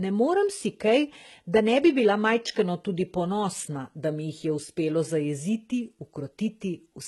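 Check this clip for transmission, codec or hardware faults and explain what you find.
One codec fault runs through the whole speech clip: likely HE-AAC compression, heavily damaged. The treble is copied up from lower bands rather than coded, so s sounds turn gritty and lispy, which fits roughly 16 kbps.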